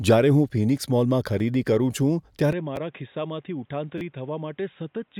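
At 1.39 s and 2.76 s a repeated buffer plays a 10 ms block twice, heard as a click. From 3.98 to 4.01 s the block repeats three extra times, giving a brief buzz. From 2.53 s the sound abruptly turns dull and quieter, about 10 dB down, with nothing above 3.8 kHz and a faint new noise floor. This likely comes from the input switching to a poorer device.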